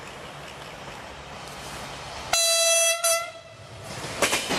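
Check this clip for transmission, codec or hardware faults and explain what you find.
Two short faults are audible, both of one kind. From 1.30 to 1.36 s and again from 4.46 to 4.52 s there is a brief glitch caused by damaged data in a compressed stream: corrupted bytes make the decoder misread those frames and lose sync until it finds the next valid frame header.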